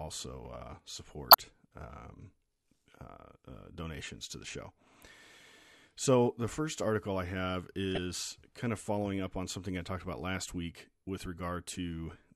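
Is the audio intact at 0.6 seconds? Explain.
Yes, the audio at 0.6 seconds is intact, with nothing audible there to suggest a dropout, glitch or other fault.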